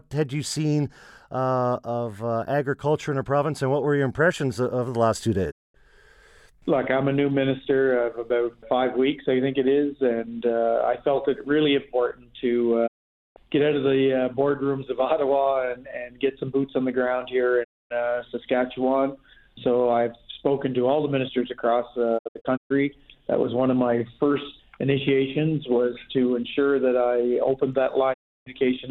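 The audio briefly fades to silence five times, at 5.50 s, 12.86 s, 17.63 s, 22.17 s and 28.12 s. The gaps last about 0.22, 0.48, 0.26 and 0.32 s, and the fourth is broken into short holes scattered over half a second. Each gap fades in about 20 ms. This is digital broadcast dropout: the receiver muted on corrupted frames, and the lengths fit whole frames of about 32 ms each.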